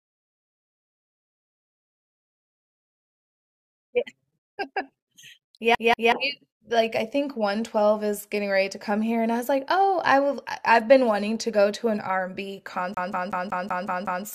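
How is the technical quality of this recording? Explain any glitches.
The recording has a repeated playback fault in two places. CD stuck on one turn appears from 5.75 to 6.12 s and again from 12.94 to 14.25 s: a scratch keeps knocking the laser back one track, so the same 187 ms slice of speech replays with a brief mute at each jump. The first instance loops twice, the second seven times, producing the quick, evenly spaced stutter of a skipping disc.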